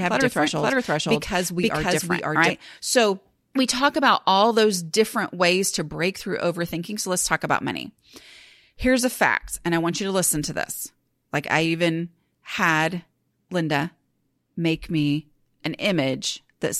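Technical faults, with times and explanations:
0–2.5 s, doubled audio track: from the start, a dry, equally loud copy trails the speech by about half a second, then stops abruptly, likely from a slower second capture path.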